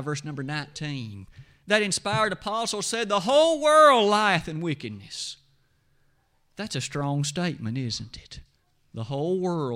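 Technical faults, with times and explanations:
Nothing stood out on listening to this speech recording.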